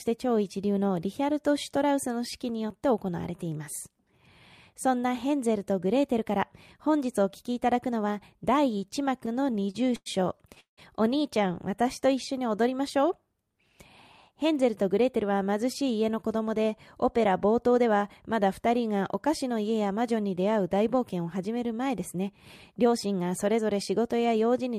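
From 9.19 to 10.79 s, late packets repeatedly emptied the jitter buffer, causing repeated stalls (stutter): 17 gaps stretch the speech by 440 ms, the longest 174 ms, so it drags and stutters. From 21.89 to 23.59 s, a jitter buffer speed-up trims an overfull buffer by cutting about a tenth of a second of pitch periods, so speech runs at 106% speed and sounds hurried.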